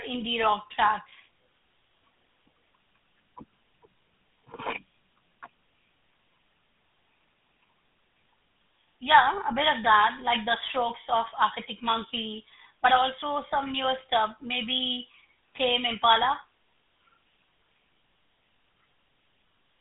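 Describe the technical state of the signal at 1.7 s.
At 1.7 s the speech carries the GSM full-rate codec's buzzy, gravelly pulse excitation, consistent with a 13 kbps rate, running throughout; the spectrogram shows a band of roughly 150 Hz to 3.6 kHz, empty above 3.8 kHz.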